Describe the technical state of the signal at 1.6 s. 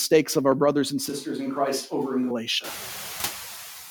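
At 1.6 s the sound is roomy and hollow, with thinner bass, from 1.10 to 2.31 s, likely a switch to a distant microphone after the close one dropped out. The level holds roughly steady, and background noise sits well below the speech, with abrupt changes at both ends.

Mild noise suppressor artifacts are also present here and throughout. The suppressor lowers noise-classified bands frame by frame, cutting noise by about 1 dB, so the residual background sinks between phrases and lifts slightly under them.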